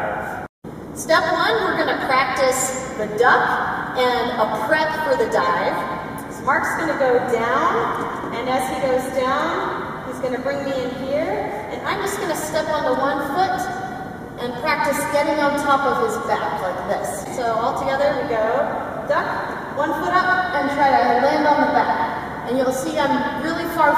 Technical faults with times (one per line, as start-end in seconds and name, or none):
none